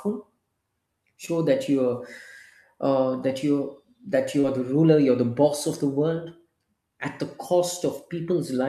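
Audio packets arrived too late for the decoder twice, giving short concealed packet loss at 1.25 to 1.29 s, just before "that you're", and at 4.41 to 4.45 s, between "uh that you're that" and "are the ruler you're". Each time the receiver extended the preceding speech for a few hundredths of a second, heard as a brief smear or wobble.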